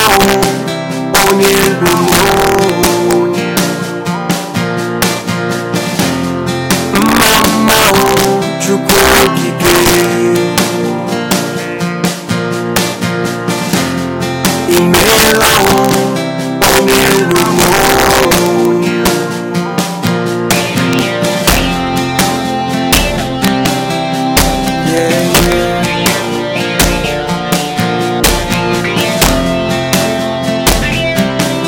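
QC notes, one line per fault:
Throughout, integer overflow: loud peaks are pushed about 4 dB past the integer limit, and around one percent of samples wrap to the opposite sign instead of being limited. Each wrapped peak jumps across the full range. This gives violent cracks, far harsher than clipping.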